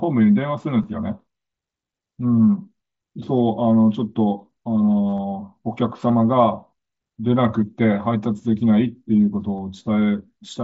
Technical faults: concealed Bluetooth headset packet loss

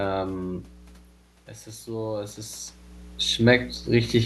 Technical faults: mains hum; automatic gain rising

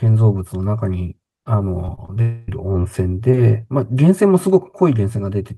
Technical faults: repeated packet loss (robotic sound); long network dropout

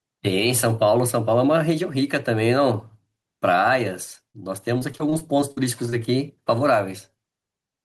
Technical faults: gain pumping; repeated packet loss (robotic sound)

